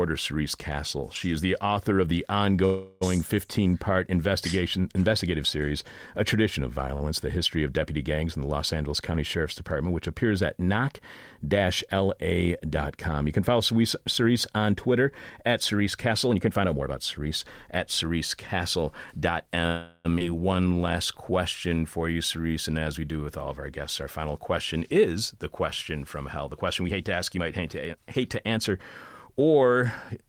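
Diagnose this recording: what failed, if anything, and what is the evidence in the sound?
Call audio freeze at the network stage. Sound stalls as a fading buzz from 2.65 to 3.03 s after "the author of the", and again from 19.67 to 20.07 s. Each gap lasts about 0.36 to 0.38 s. Playback then resumes intact. The likely cause is delayed packets emptying the jitter buffer.

Short stall from a late packet, also at the network stage. From 6.95 to 7.03 s one sound is held 56 ms too long. The buffer stretched it while waiting. Nothing is lost.

Jitter buffer speed-up, in the buffer stage. From 16.07 to 19.60 s speech runs 110% fast at normal pitch, trimming roughly 0.4 s. From 24.03 s after "all of our guests" to the end, it runs 106% fast.

Skip ahead at the network or buffer stage. At 20.19 to 20.22 s playback jumps forward. Around 0.3 s of speech is missing, and the two sides are joined almost directly.

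Jitter buffer slow-down, in the buffer stage. From 20.56 to 23.24 s, before "with all of our", speech drags at 90% speed and the same pitch. Repeated pitch periods add 277 ms to rebuild the reserve.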